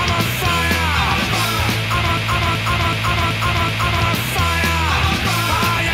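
A broken-record loop runs from 2.17 s to 4.0 s: a fragment about 378 ms long plays five times in a row, each repeat identical and butted against the next, so the sound stutters in a fixed, mechanical rhythm rather than moving forward. The likely cause is a player, encoder or stream that stalled and kept re-sending the last piece it held, and whatever audio belonged in those seconds is gone.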